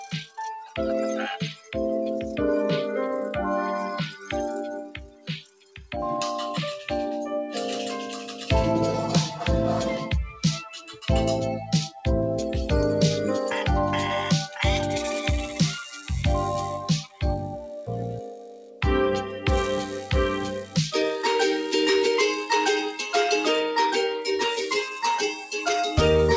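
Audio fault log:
throughout, noise suppressor applied to music or sounds: a suppressor tuned for speech is treating the steady parts and the ambience as noise, so the level keeps wobbling by a few dB. Onsets get through, but sustains and tails thin out and gently pump. The top end stops around 8 kHz, which fits a wideband call codec.
1.55 to 25.63 s, sound cut by the noise suppressor: it clamps down harder at 1.55 to 1.75 s (about 10 dB), 4.77 to 5.94 s (about 18 dB, the worst), 10.76 to 11.06 s (about 9 dB), 17.03 to 17.23 s (about 14 dB), 17.47 to 17.89 s (about 11 dB), 18.17 to 18.82 s (about 12 dB) and 25.26 to 25.63 s (about 8 dB). Each time a sound gets mistaken for noise and sinks, or its decay is chopped short.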